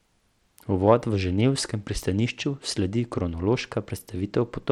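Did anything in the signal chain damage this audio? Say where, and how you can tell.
Yes. The damage sits at the codec stage and runs through the whole speech clip: the treble flickers and drops in and out, and a gritty, grainy noise with aliasing rides on the voice. That points to Bluetooth SBC compression as the likely cause, with a starved bit pool, consistent with a rate near 96 kbps. SBC's coarse per-band bit allocation gives the weak upper sub-bands few or no bits and roughly quantises the rest.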